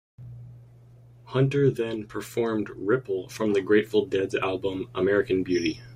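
Clock slip clicks run from 0.34 s to 5.72 s: faint, evenly spaced ticks, around ten in all, roughly every 0.7 seconds through the speech. The steady spacing likely comes from two devices running on unsynchronised clocks that differ by something like 40 parts per million, so each time the drift adds up to a full sample, one sample is dropped or repeated and a tiny discontinuity clicks through.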